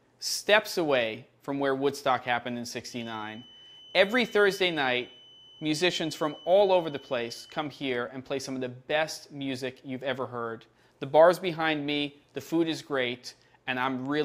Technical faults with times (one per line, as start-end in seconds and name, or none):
2.85-7.73 feedback whistle